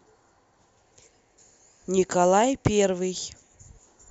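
Speech, with nothing technically wrong to report anywhere in the recording.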